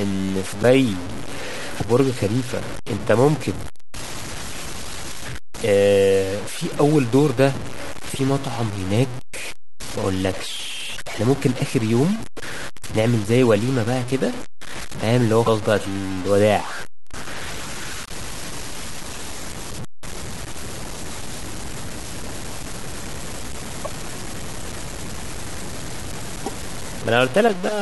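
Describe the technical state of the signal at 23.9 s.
Just before that moment, from 23.84 to 23.87 s, a brief chirp, burst of noise or short hole interrupts the speech and the audio skips ahead. This is likely a broken MP3 bit reservoir. Frames, each roughly 26 ms long, went missing, and the next frame decoded someone else's bytes. The speech also sounds grainy and gritty, with distortion that follows its level. The noise sits only about 15 dB below the signal. This points to low bit depth without dither, with undithered truncation to around 5 bits.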